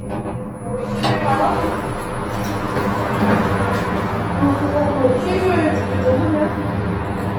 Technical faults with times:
0.00-7.38 channel delay (comb filtering)
0.00-7.38 Opus compression

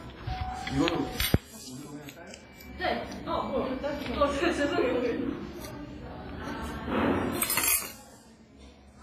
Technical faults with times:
0.00-9.03 WMA compression

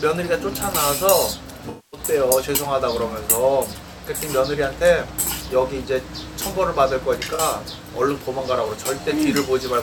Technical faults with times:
1.69-2.00 AAC frame loss with concealment
7.34-7.40 AAC frame loss with concealment

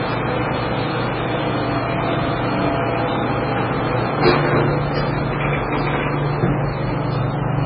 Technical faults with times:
0.00-7.65 MP3 compression

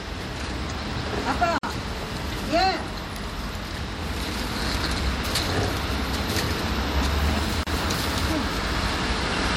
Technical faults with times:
1.58-1.63 gap at a join of encoded pieces
7.63-7.67 gap at a join of encoded pieces

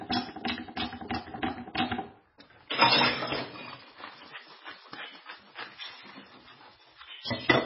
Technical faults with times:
0.00-7.65 MP3 compression

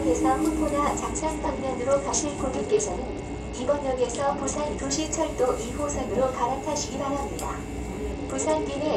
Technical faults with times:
1.11-4.90 Bluetooth SBC bit pool drop
8.12-8.96 Bluetooth SBC bit pool drop

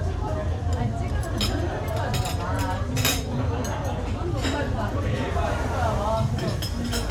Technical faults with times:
none

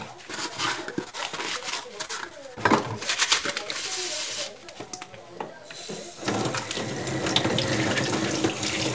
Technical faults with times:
1.04-2.58 repeated packet loss (robotic sound)

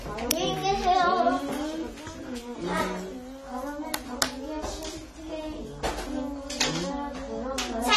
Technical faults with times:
0.00-7.96 AAC compression

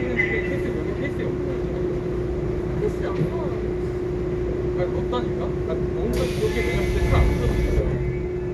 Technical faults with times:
0.00-8.54 MP2 compression

